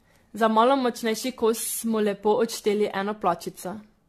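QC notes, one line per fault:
Throughout, generation loss: the speech has a swirly, hollow, smeared quality that's heavier than a single lossy pass would leave, consonant attacks are blurred, and there's nothing above 14 kHz. That's likely from being run through AAC-LC encode and decode around seven times, at what sounds like 64 kbit/s. Each pass quantises on a shifted frame grid, so the noise and spectral holes keep stacking up.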